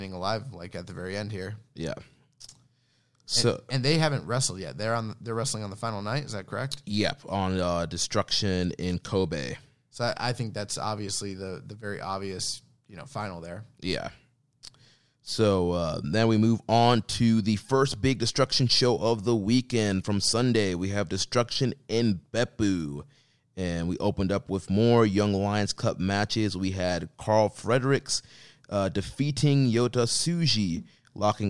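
Speech recording with no audible technical faults.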